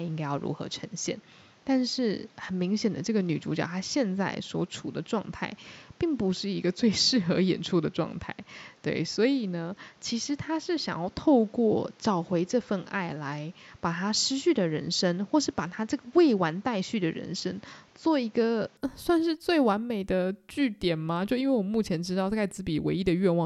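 Input switched to a poorer device, from the start to 18.77 s of this speech recording: everything above 7.6 kHz is missing, with added background noise around 35 dB down, likely from a narrower-band microphone, before the sound clears with no gap or level jump.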